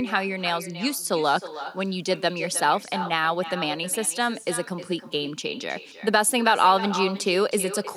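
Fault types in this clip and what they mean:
Echo with no canceller: on the far end of the call, the loudspeaker's output is picked up again by the microphone there, and no echo canceller subtracts it before it is sent back. The speech therefore returns after its round trip through the network, and throughout this clip each phrase is trailed by a copy roughly a third of a second later, about 12 dB quieter and thinner than the original speech.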